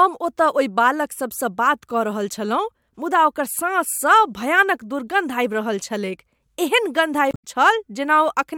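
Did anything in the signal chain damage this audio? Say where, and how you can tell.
Yes. The compressed stream carries damaged data, so between 7.31 and 7.45 s the decoder misreads the corrupted frames and loses sync while hunting for the next valid frame header. The speech there breaks into a brief glitch lasting about 0.14 s.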